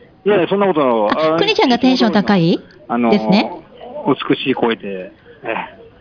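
No technical faults are audible.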